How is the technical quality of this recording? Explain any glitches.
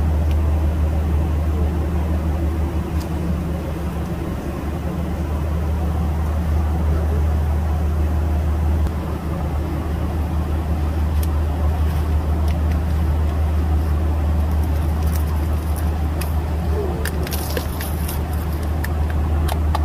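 Technical quality is poor, with grainy distortion running through the whole recording. Low bit depth without dither, likely from truncation to around 7 bits, leaves an error about 30 dB below the signal that tracks the sound, so quiet passages turn gritty. On a waveform this shows as visible stair-steps, and on a spectrogram as a signal-dependent haze.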